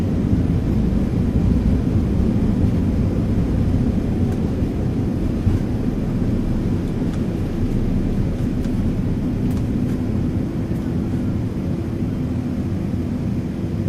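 Throughout the clip, every sound returns about a second and a half later as a clean, full-band copy, roughly 5 dB quieter, with no decay or room colour. This doubled audio track likely comes from a second, slower capture path mixed back in.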